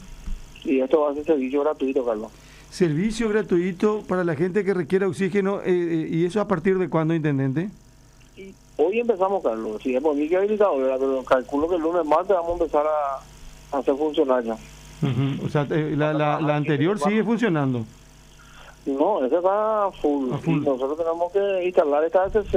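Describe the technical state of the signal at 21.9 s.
At 21.9 s the signal is intact, with no audible fault at that moment.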